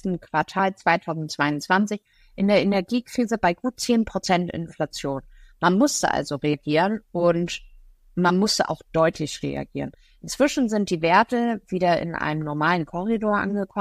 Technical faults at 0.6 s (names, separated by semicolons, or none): damaged data in a compressed stream